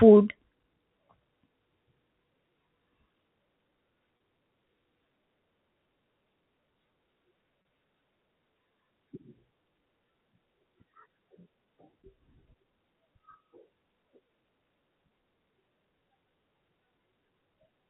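Speech carried over G.711 A-law telephone coding, which leaves nothing above 4 kHz, with two short dropouts repaired by packet loss with pitch repetition, at 4.17 to 4.20 s and 7.62 to 7.65 s. Each gap lasts 30 ms, which fits a single lost packet. The receiver bridged it by looping the last pitch period, so each spot sounds like a brief buzzy hold. A waveform shows identical repeated cycles there, and a spectrogram shows momentarily frozen, flat harmonic lines.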